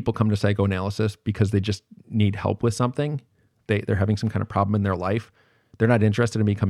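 No technical faults are audible.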